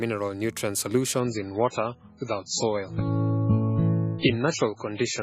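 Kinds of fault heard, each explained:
Adaptive stream at a lower bitrate: From 1.2 s the sound abruptly loses its treble above about 7.6 kHz and turns smeared, suggesting a drop from 128 to 16 kbit/s.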